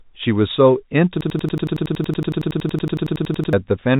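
From 1.21 to 3.53 s, a system hang loop replays one 92.9 ms chunk identically at 10.8 Hz. The result is a rigid machine-gun stutter whose exact, unfading repeats set it apart from packet-loss concealment.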